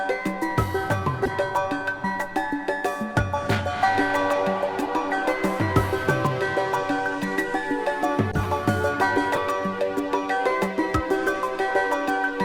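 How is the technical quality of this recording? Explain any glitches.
Three short glitches: corrupt frame decoded, at 1.25 to 1.34 s, 8.30 to 8.46 s and 9.35 to 9.38 s. Damaged compressed frames were decoded anyway, so misread gains and codes threw loud energy into wrong frequencies for a few frames. Each is a harsh chirp or noise burst, seen as bright smears on a spectrogram and sudden spikes in the waveform.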